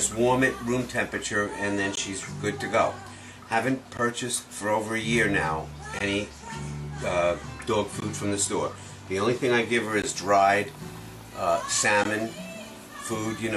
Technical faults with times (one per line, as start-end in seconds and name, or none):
1.95 gap at a join of encoded pieces
3.97 gap at a join of encoded pieces
5.99 gap at a join of encoded pieces
8.00 gap at a join of encoded pieces
10.02 gap at a join of encoded pieces
12.04 gap at a join of encoded pieces